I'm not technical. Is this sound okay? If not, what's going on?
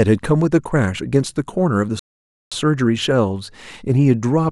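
No. At 1.99 s the speech cuts to silence, then picks up at 2.52 s exactly where it stopped: a rebuffering stall, the player waiting about half a second for more audio to download.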